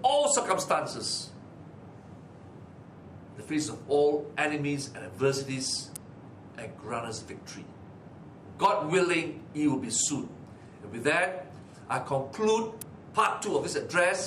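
At 5.96 s a sharp snap cuts across the sound. It lasts only a few milliseconds and peaks somewhere around -15 dBFS. A second, matching snap lands at 12.81 s. Both are electrical switching spikes. The likely cause is a nearby switch, motor or static discharge arcing briefly, with the audio line picking up that burst of interference. Each one sits on top of the sound as a hard, isolated click.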